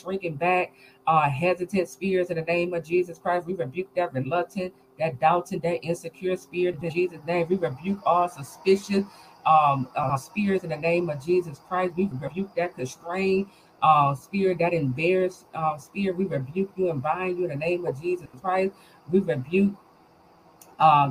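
Frames out of order at 6.74 to 6.94 s, 10.03 to 10.18 s, 12.11 to 12.31 s and 18.26 to 18.42 s: two adjacent blocks, 80 ms each (60 ms at 10.03 s), play swapped, giving a brief garbled flutter and no lost time.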